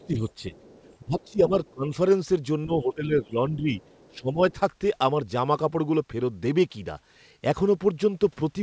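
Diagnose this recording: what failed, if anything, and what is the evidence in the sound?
Other side's voice leaking through, at 0.00 to 1.31 s, 1.65 to 1.70 s and 3.80 to 4.16 s: a faint second voice sits under the talker, about 30 dB down in the first stretch and about 35 dB down later. This points to the call-processing stage. The far end's audio, played on the talker's loudspeaker, was picked up by the microphone, and the echo canceller likely failed to subtract all of it. The residue reaches the listener as scraps of the other side.

Speech suppressed in double talk, at 0.07 to 0.54 s, 1.04 to 1.93 s, 2.65 to 3.73 s and 4.10 to 4.60 s: the talker's level sags in patches. The first dip is only a few dB, the second reaches roughly 15 dB, and the later two around 10 dB. Most of these dips overlap the leakage, so both sides were likely talking at once. Unable to tell near speech from echo, the echo canceller turned everything down, pulling the talker's voice down with it.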